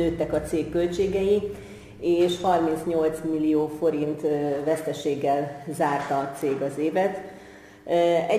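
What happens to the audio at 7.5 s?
The sample rate was changed by crude rate conversion, and the sound at 7.5 s carries it, as does the whole clip. Samples were simply dropped to the nearest position with no filtering, a pattern that fits a 48 kHz to 44.1 kHz conversion. The repeating drop errors sit about 30 dB below the signal and form inharmonic tones, heard as a gritty fizz that rides on the louder and brighter parts of the sound.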